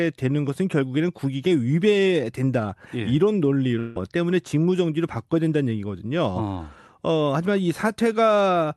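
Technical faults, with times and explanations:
3.79 to 3.97 s, long network dropout: for about 0.18 s the speech is replaced by a continuation of the last sound, a buzz or hiss that fades rather than breaking off, and there is no full silence before the speech resumes. About 160 ms of the original speech never returns. This is likely a burst of lost packets on the call path, with the receiver concealing the hole by extending what it last had. That path tops out near 12 kHz.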